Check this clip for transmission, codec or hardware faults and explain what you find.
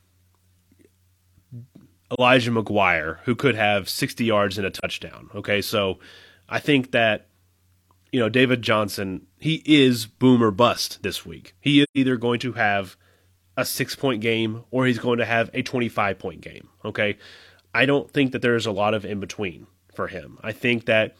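The clip has one fault type, AAC frame loss with muting, at 2.14–2.20 s, 4.77–4.84 s and 11.83–11.98 s. Zeroed frames fade out and back in, leaving soft-edged full-band gaps, which fit one, one and three lost frames of about 43 ms each.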